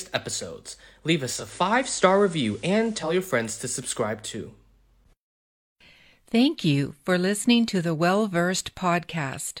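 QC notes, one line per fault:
1.28–3.20 s, digital radio blending to analogue: the receiver lost its digital stream and cross-faded over about 250 ms to the station's FM broadcast, returning to digital just before "friends to subscribe too". On the spectrogram, a faint broadband hiss floor, roughly 30 dB below the sound, fills the background for that span. On the waveform, the level shifts by only about 1 dB, with soft ramps at both edges.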